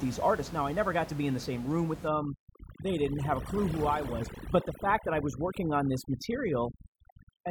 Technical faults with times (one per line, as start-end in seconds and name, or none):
2.08-7.50 overdone noise removal